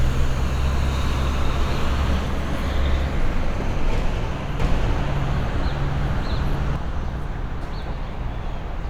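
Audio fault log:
4.60–6.76 s, doubled audio track: a second, full-band copy of the sound runs roughly 0.7 s behind the original at about the same level, with no decay or added room colour. It starts and stops abruptly, the likely result of a slower second capture path or an edit leaving two copies out of step. On a waveform and spectrogram, every onset appears twice at that fixed spacing, the later copy matching the first in shape and brightness.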